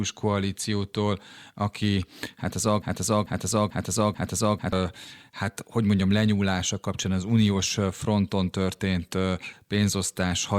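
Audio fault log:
2.82–4.73 s, broken-record loop: Playback likely stalled and kept resending the last fragment still held in its buffer. Right after "aki hát az", a 0.44 s slice of speech repeats exactly, back to back, four times, giving a stuttering, mechanical echo with identical attack and decay on every pass. Whatever should have been heard in those two seconds never arrives, and the audio jumps straight on to "hát hogy mondjam lenyúlása".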